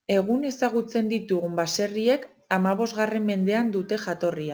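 Sample clock jitter runs right through the speech. The converter clock wanders by around five microseconds, so samples land a touch early or late, and the error tracks the waveform's slope. You get a roughness roughly 30 dB down that rises on loud, bright syllables and vanishes in pauses.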